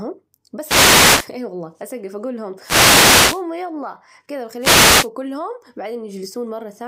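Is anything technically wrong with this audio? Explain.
Yes: wireless microphone noise hits at 0.61–1.31 s (before "أي والله أسجف أجول"), 2.59–3.44 s (after "والله أسجف أجول لهم") and 4.59–5.09 s (after "يلا كده"). The FM radio link faded through reflection cancellation, so receiver noise rose, heard as brief swishes of static.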